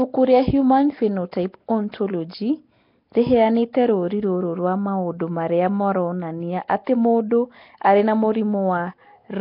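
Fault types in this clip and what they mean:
Nellymoser compression: likely the old Flash Nellymoser Asao codec, coding short blocks at a low fixed rate, so weak bands are swapped for noise; this speech carries heavy rough, hissy, underwater damage at around 22 kbps, with nothing above about 5.3 kHz.
Pre-echo: the codec spreads quantisation noise across a whole block, so noise meant for a sharp attack leaks into the quiet just before it; here a brief hiss of about 15 to 16 ms smears two onsets, near 1.92 s and 6.68 s, the second right after "rwa maũndũ marĩa maronania".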